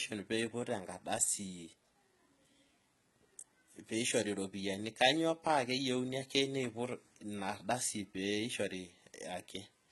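From start to finish, the speech likely carries HE-AAC compression, and the damage is heavy. Treble above roughly the crossover is rebuilt from copied lower bands, not kept. Harmonics there fail to align. S sounds turn gritty and lispy. Nothing sounds above 11.8 kHz, which fits a low bitrate near 16 kbps.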